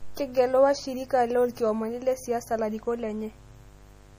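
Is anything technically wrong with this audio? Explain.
Yes, there are two faults, and both run through the entire speech clip.

A mains buzz sits under the whole recording, built on 50 Hz. Sharp switching spikes from something like a dimmer, rectifier or unshielded lead enter the signal twice per mains cycle, so the interference carries a dense series of 50 Hz harmonics reaching up into the kilohertz range. That gives a steady, raspy buzz rather than a smooth hum, sitting roughly 25 dB below the speech.

The speech also sounds watery and swirly throughout, with smeared consonant onsets and metallic chirping on sibilants. Nothing is present above 15.3 kHz. This is likely MP3 compression at a low bitrate, around 40 kbps. Starved of bits, the encoder cuts the treble at a fixed point and drops weaker frequency lines, which then flicker on and off between frames. That flickering produces the swirl and chirps, and the coarse time resolution blurs attacks.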